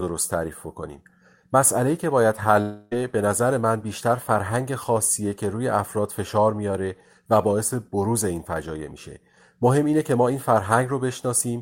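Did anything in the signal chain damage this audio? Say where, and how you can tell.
Yes. A long network dropout runs from 2.61 to 2.93 s in this speech. For about 0.3 s the sound turns into a smeared buzz that decays instead of continuing naturally, and then the speech resumes with that stretch missing. The smearing is the receiver stretching its last good audio to hide the gap, and it lasts the whole gap without dropping to silence. The likely cause is a burst of packets lost in the network stage.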